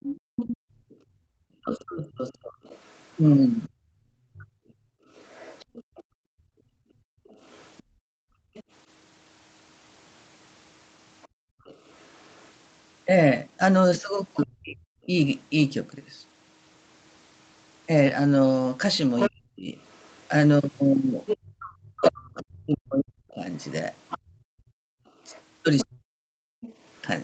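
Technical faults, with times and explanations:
0.0–14.4 s and 19.19–27.2 s, other side's voice leaking through: a second voice sits under the talker, faint at first, roughly 20 dB down, then nearly as loud, about 5 dB below, from 19.19 s. This is likely loudspeaker echo the canceller failed to subtract from the microphone.
0.2–1.31 s, 4.81–11.65 s and 24.18–25.06 s, background gated by the echo canceller: the canceller clamped the microphone while the loudspeaker played, so room sound drops away by about 40 dB for roughly one second, then three seconds in all, then one second, before returning.
1.59–4.53 s, 14.43–15.14 s and 19.29–26.43 s, speech suppressed in double talk: with both sides talking, the canceller likely mistook the talker for echo and attenuated both. The talker's voice dips or breaks up by around 35 to 40 dB, totalling about one and a half seconds, half a second, then three seconds.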